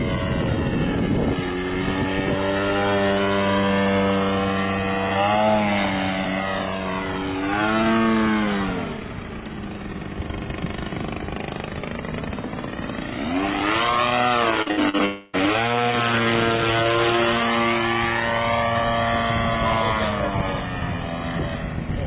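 From 14.62 to 14.95 s the sound turns choppy, with pieces missing, the signature of repeated packet loss (robotic sound). Four short holes open in quick succession, the longest about 62 ms, and each is patched by stretching out the sound just before it, so nearly half of that third of a second is synthetic fill. What separates this from a single dropout is the rapid alternation: real audio and patched fragments keep trading places, giving a stuttering, choppy texture rather than one continuous smear.

A tenth of a second later, from 15.05 to 15.35 s, comes one unbroken stretch of about 280 ms in which the original audio is gone and the last sound is held and drawn out as a fading buzz. It never reaches full silence before the real signal resumes. The missing material is simply skipped, not delayed. A single long, smooth smear instead of a string of short chops points to a long network dropout as the likely cause, not to repeated small losses. 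Throughout, nothing is heard above 4 kHz, consistent with a G.711 mu-law call at 64 kbps.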